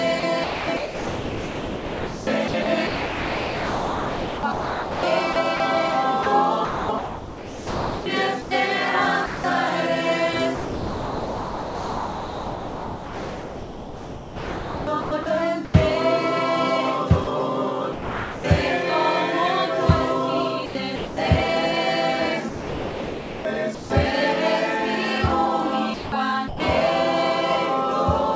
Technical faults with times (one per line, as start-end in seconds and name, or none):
0.20-9.44 sound chopped by the voice detector
10.55-15.74 sound chopped by the voice detector
17.24-18.44 sound chopped by the voice detector
20.66-21.17 sound chopped by the voice detector
22.49-23.90 sound chopped by the voice detector
25.94-26.60 sound chopped by the voice detector